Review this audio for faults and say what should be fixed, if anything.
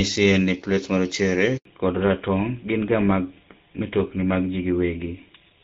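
At 1.57 s there's a handover gap. The call hopped networks and no speech frames arrived for 80 ms, so the audio drops out fast and stays silent until 1.65 s, and whatever was said there is lost. Make-before-break handover would prevent it.

From 1.65 s to the end there's a fallback to narrowband. Before that you hear the fuller HD Voice sound of AMR wideband. Afterwards nothing is left above 4 kHz and it turns duller and rougher, which fits a drop to GSM full rate. Keeping wideband negotiated through handover would prevent it.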